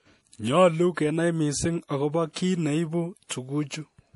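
From start to finish the speech carries plainly audible codec damage, most likely MP3 compression at a bitrate that fits roughly 48 kbps. Nothing sounds above 11.4 kHz, and weak detail flickers in a watery, swirly way. That flicker is what separates it from a simple low-pass filter's clean dullness.

At 2.33 to 2.36 s, a pre-echo smears a short hiss across about 28 ms just before a sharp onset. The coding noise for the loud attack spilled back into the quiet moment ahead of it. Unlike reverb or echo, the hiss comes before the attack, not after it.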